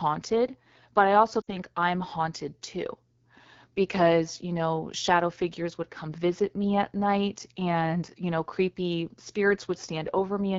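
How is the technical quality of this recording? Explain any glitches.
Technical quality is poor. Codec damage runs through the whole clip, and a dropout breaks the speech once.

The AMR wideband (HD Voice) codec colours all of the speech. It rebuilds the voice from a pulse-excited model of the vocal tract up to 6.4 kHz. Above that, to 7 kHz, it adds shaped noise instead of real detail. The damage is plainly audible here. Voices sound rough and raspy, with a gritty, synthetic edge. This fits the low 8.85 kbit/s mode, one of the two lowest rates.

Lost AMR speech frames cause a glitch from 1.42 to 1.53 s, right after "but I also" and before "I'm haunted". Radio errors corrupted a short run of frames, which fits three lost frames, about 60 ms in total. The decoder filled the gap by repeating the last good pitch and vocal tract settings at falling gain. The sound drops to near silence within two frames and returns weak or rough for a moment.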